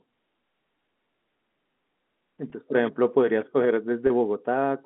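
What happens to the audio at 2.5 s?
A brief held, faintly buzzy sound from 2.5 to 2.52 s: packet loss with pitch repetition, where the receiver repeats the last pitch period across a 20 ms gap, consistent with two 10 ms packets.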